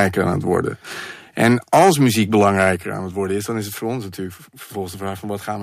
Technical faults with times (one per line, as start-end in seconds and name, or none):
1.43-1.90 microphone overload
1.77 microphone volume stepped down
2.40-2.70 microphone overload
2.76 microphone volume stepped down